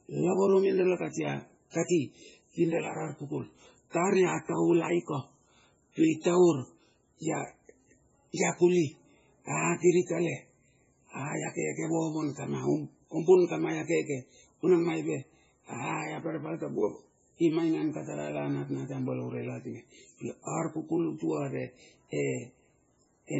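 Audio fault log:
Throughout, MP3 compression: the speech sounds watery and swirly, with a dull top end and nothing above about 7.6 kHz. The cause is likely heavy MP3 encoding at a very low bitrate, with the damage pointing to something around 16 kbps. Starved of bits, the encoder cuts the treble at a fixed point and discards weak frequency components, which flicker in and out from frame to frame and leave that unstable, underwater texture.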